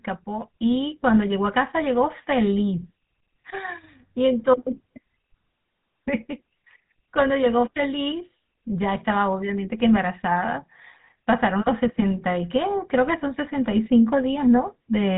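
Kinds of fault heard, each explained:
GSM full-rate codec: throughout this speech, vocal-tract modelling with sparse pulse excitation gives a plainly buzzy, gravelly roughness, and nothing passes above 3.8 kHz.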